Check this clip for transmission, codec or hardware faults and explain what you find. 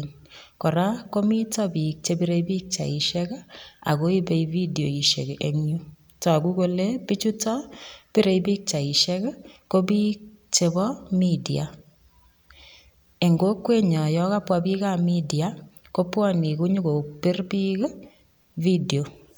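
Nothing stood out on listening to this speech recording.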